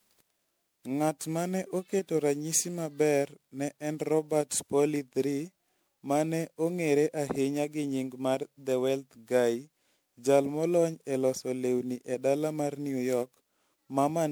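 Throughout, the speech sounds swirly, smeared and hollow, with blurred attacks: generation loss, likely from around ten successive MP3 re-encodes, consistent with a 128 kbit/s chain.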